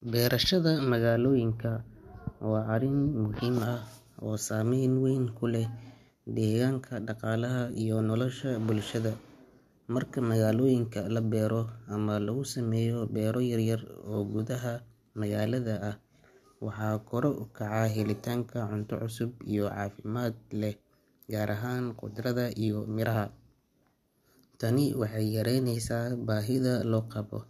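Listening through this recording of speech, nothing stood out as a technical fault at any point.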